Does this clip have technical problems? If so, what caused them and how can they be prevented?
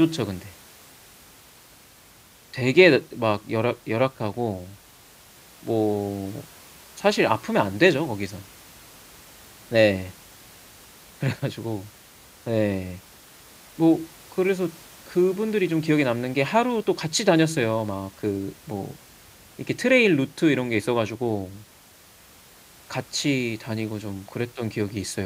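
No, this speech clip has no technical problems, so there is nothing to trace or prevent. The only background sound is the room noise picked up by the microphone, sitting about 26 dB below the speech.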